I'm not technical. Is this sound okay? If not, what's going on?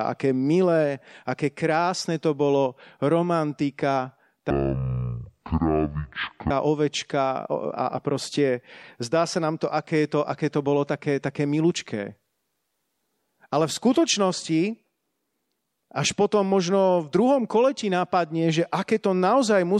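No, not entirely. From 4.50 to 6.50 s, just after "krásne to bolo romantika", the speech suddenly drops to half speed and a full octave lower, sounding slow and deep. This is a stereo read as mono fault: the left and right channels were stored alternately, and the player read them as one long single channel, so each moment of sound was stretched to twice its length and its pitch halved.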